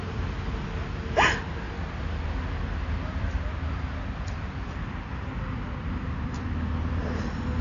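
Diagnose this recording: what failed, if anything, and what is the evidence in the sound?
The sound is dull and smeared for the whole clip, with plainly audible codec damage. Nothing is present above about 7.1 kHz, and the band edge is hard, not a gentle roll-off. At the codec stage, the likely cause is AAC compression: an AAC-LC encoder starved of bits, consistent with roughly 32 kbps, lowers its cut-off and quantises the remaining spectral lines coarsely. That discards the top octave and blurs detail across frames.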